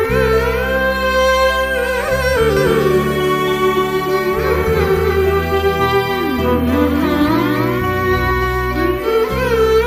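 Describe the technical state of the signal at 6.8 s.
At 6.8 s the sound is heard twice: a second, full-band copy trails the original by roughly 300 ms at about 5 dB lower, with no reverberant tail or room colouring, and it cuts in and out abruptly. This doubled audio track runs from 2.57 s to 8.31 s. The likely cause is the same signal reaching the mix a second time through a slower path, or an edit leaving two copies out of alignment.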